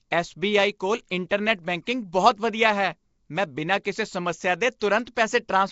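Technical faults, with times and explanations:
Throughout: Nellymoser compression, likely. The speech has a rough, hissy halo and underwater smear. Nothing remains above 7.7 kHz, which fits a rate near 32 kbps.
1.29 s, 5.05 s, and 5.14 to 5.17 s: pre-echo. Hiss lasting 15 to 27 ms precedes attacks after "ਐੱਸ ਬੀ ਆਈ ਕੋਲ" and "ਸਮੱਸਿਆ ਦੇ". Block-wide quantisation noise leaks ahead, softening each onset.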